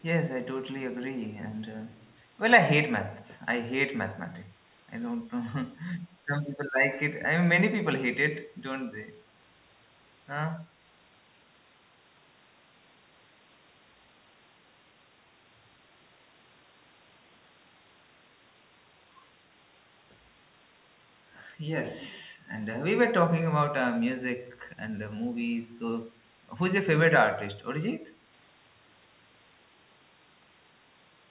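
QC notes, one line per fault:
1.91–2.14 s, echo leak: a faint delayed copy of the speech, arriving about 222 ms behind the original and sitting very low, far beneath the direct signal, audible as a brief smear over roughly a quarter second. The likely cause is an echo canceller at a loudspeaker end that failed to fully suppress its microphone pickup, returning that residue down the line. The copy is band-limited like the rest of the call audio, with nothing above 4 kHz.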